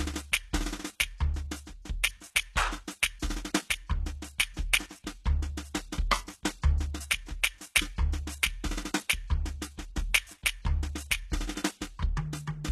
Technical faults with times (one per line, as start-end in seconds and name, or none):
0.00-12.71 low-bitrate audio saved at a high bitrate